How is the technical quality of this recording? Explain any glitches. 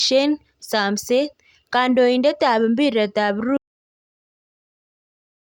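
The recording has one clear fault. At 3.57 s the speech stops dead and the audio drops out to silence for the rest of the clip, about 2.03 s. It happens just after "ap piret ap". This is an audio dropout to silence. The input was likely lost, through a disconnected device, a failed link or a mute, while the recorder kept writing silence. The gap is silent with no room tone, and whatever followed is gone.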